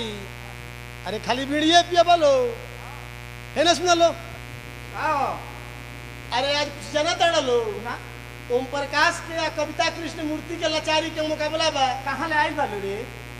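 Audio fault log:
Throughout: mains buzz. A steady, raspy buzz sits under the whole clip at roughly 15 dB below the wanted sound. Its fundamental is 60 Hz, with harmonics climbing well into the kilohertz range. That dense spectrum comes from sharp switching spikes, from a dimmer, a rectifier or an unshielded run, which enter twice per mains cycle and give the buzz its edge, rather than a smooth hum.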